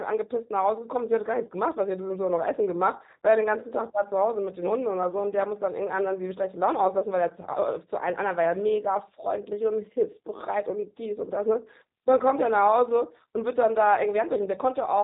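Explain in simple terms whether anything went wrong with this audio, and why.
The whole clip carries G.729 codec damage. This phone-call codec rebuilds speech from a simplified model of the voice, so it sounds clearly rough and synthetic, and nothing above 3.8 kHz survives. Simple muffling would dull the sound without adding this artificial graininess.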